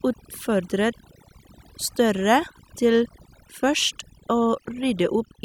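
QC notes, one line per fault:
Throughout: overdone noise removal. A noise reduction stage was pushed too hard on noisy speech, switching off frequency bands near its noise estimate. Quiet speech detail vanishes with them. Pauses drop to near silence with twinkling specks.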